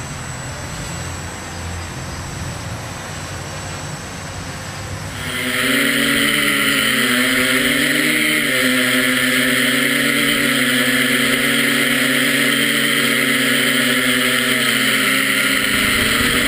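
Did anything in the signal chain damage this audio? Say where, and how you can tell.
No, nothing in this audio shows damage from the signal chain. No stage between capture and playback leaves any audible trace of trouble.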